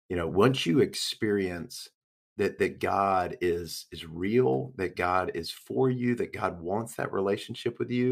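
At 0.94 s, just after "you know once you", a bit error spike: one flipped bit throws a single sample to about -15 dBFS before it snaps back. It sounds like a sharp, isolated tick, showing as a one-sample needle on the waveform and a thin full-band vertical line on the spectrogram.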